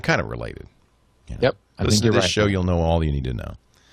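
At 1.84 to 1.88 s, just before "to this right show", the speech has chunks out of order. One 20 ms chunk arrived or was written one chunk late, so it plays after the chunk that should have followed it. No audio is missing, but the two segments are swapped, and that creates three abrupt joins. The result is a brief scrambled flicker in the speech.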